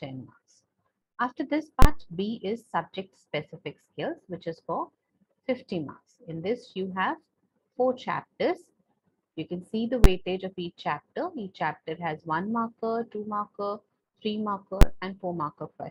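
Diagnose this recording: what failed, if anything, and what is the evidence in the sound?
Invalid numbers at full scale in processing: bangs at 1.82–1.85 s, 10.04 s and 14.81 s, each a block fitting 1024 or 512 samples pinned at one extreme value.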